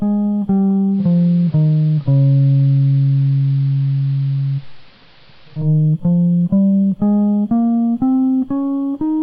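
A music clip with digital radio blending to analogue from 0.90 s to 5.69 s. The receiver lost its digital signal and cross-faded over 156 ms to the AM broadcast. Faint hiss appears, and the level shifts by about 1 dB.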